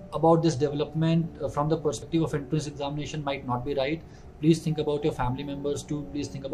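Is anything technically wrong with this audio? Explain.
Yes. Between 1.74 and 2.02 s, compressed frames are skipped. Whole blocks of the encoded stream never reach the output, either because they are missing or because the decoder rejected them as damaged. Playback jumps ahead by roughly a tenth of a second. The lost stretch is simply gone.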